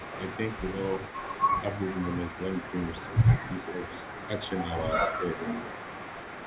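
Echo leak runs through nearly all of this speech clip, from 0.0 to 4.87 s and again from 5.04 s to the end. A second copy of the voice trails the original by about 383 ms at roughly 15 dB below it. The likely cause is a far-end loudspeaker whose echo canceller let part of the returned signal through, so the talker hears themselves come back. Speech suppressed in double talk shows up as brief level dips of around 5 dB at 1.62 to 1.68 s, 4.93 to 4.99 s and 5.19 to 5.45 s, the last lasting about 200 ms. At those moments the voice ducks slightly, within a band already capped at 4 kHz, which fits a G.711 telephone path. This is likely the echo canceller mistaking overlapping talk for echo and turning everything down together.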